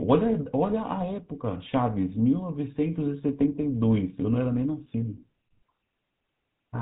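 Speech carrying GSM full-rate codec damage throughout: nothing above 3.8 kHz, plus a buzzy, gravelly roughness from pulse-driven excitation, fitting 13 kbps, unlike clean telephone band-limiting.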